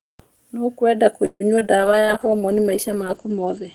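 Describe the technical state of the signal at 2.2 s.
At 2.2 s you're inside a call bitrate drop that starts around 1.78 s and runs to the end. The encoder falls from 32 to 11 kbps and narrows bandwidth from 20 kHz to 8 kHz, so speech sounds coarse and muffled, with the top end gone.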